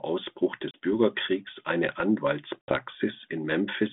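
At 0.71 s and again at 2.61 s there's packet loss on an ADPCM call, one 30 ms gap, then a longer 70 ms one (several packets). Each hole is hard-edged silence, and the speech comes back with brief distortion because the G.726 decoder's predictor and step size drifted from the sender's, settling by about 0.76 s and 2.75 s.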